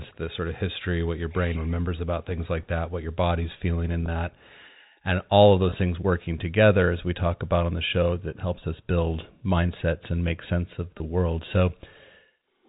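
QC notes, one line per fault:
4.06–4.08 s, 5.70–5.72 s, 10.98–11.00 s: packet loss with pitch repetition. Single 20 ms packets dropped after "your body's feeling in", "all of" and "and make sense of". The receiver repeats the last pitch cycle to fill each gap, briefly holding the sound with a faint buzzy sustain before normal audio resumes.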